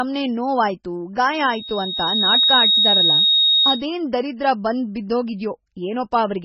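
A speech recording with heavy MP3 compression throughout: a watery, swirling texture as weak frequency components flicker in and out, and nothing above 7.8 kHz. It is likely a very low bitrate, about 16 kbps, and the warbling sets it apart from a simple low-pass filter, which would dull the sound without it. From 1.33 to 3.86 s a loudspeaker feedback squeal appears, a single 3.8 kHz tone that swells over roughly a second to about 5 dB above the speech. That build-up marks it as a loop running away, unlike a steady interfering whine.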